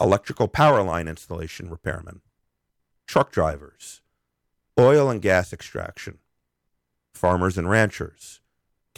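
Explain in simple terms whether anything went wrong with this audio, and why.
Yes, briefly. Hard clipping occurs at 4.79 to 4.88 s and 7.25 to 7.33 s. The speech got too loud, so peaks were cut flat, adding crackle.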